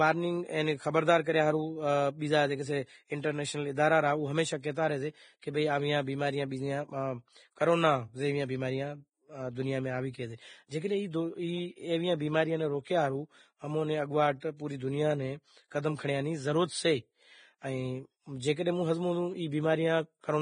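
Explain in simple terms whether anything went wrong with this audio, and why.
The speech sounds hissy and grainy throughout, with a dull top end because nothing above about 9.7 kHz comes through, and consonants lose their crispness. This is heavy Vorbis compression, likely applied with a very tight data budget. To save space, the codec discards the highest frequencies and describes the remaining treble so roughly that fine detail turns into noise of similar loudness, which is where the grain comes from.

There is also pre-echo in two places: from 3.21 to 3.24 s, and at 5.41 s. Each time, a short hiss arrives just before a sharp sound, and the sharp sound itself seems softened or smeared. The codec processes audio in short blocks and spreads its noise evenly across each one. When a sudden sound lands late in a block, that noise also fills the quiet moment before it.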